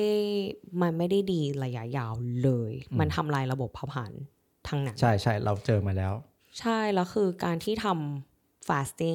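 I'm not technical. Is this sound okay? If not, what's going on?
No. At about 7.59 to 7.68 s there is a wireless microphone noise hit: a brief burst of static lasting under a tenth of a second. The microphone's radio signal dipped for a moment, letting the receiver's own hiss break through over the speech.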